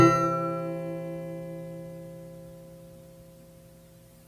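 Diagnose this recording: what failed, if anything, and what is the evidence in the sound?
Nothing in the audio stood out as a fault on listening.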